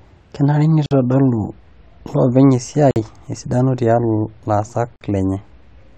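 The speech was carried in 2.0-second chunks, and a gap between chunks appears at each join, leaving 50 ms of silence inserted rather than any sound removed. This happens from 0.86 to 0.91 s, from 2.91 to 2.96 s and from 4.96 to 5.01 s. Each one is heard as a brief hole that cuts the speech off and then resumes it, recurring at a steady two-second spacing.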